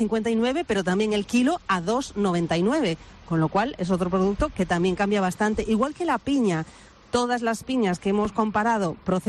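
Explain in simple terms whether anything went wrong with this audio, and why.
Nothing went wrong with this audio, and there is no fault to point to anywhere in it. At no moment does anything happen that would need an explanation.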